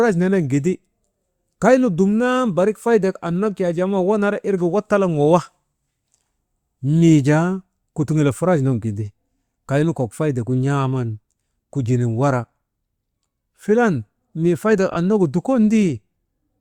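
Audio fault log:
14.91 to 14.96 s, frames out of order: right after "filan mii faydek", two adjacent 20 ms frames play swapped, giving a brief garbled flutter, visible as abrupt spectral discontinuities and waveform steps.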